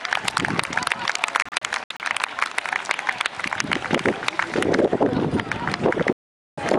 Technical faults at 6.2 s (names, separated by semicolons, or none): digital broadcast dropout